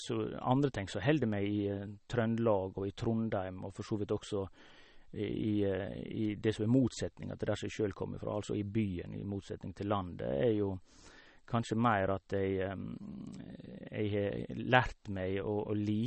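Speech runs the full clip with nothing above 8.4 kHz. It sounds watery and swirly throughout, with metallic chirps on s sounds and smeared attacks. The likely cause is MP3 compression at a low bitrate, which fits about 32 kbps.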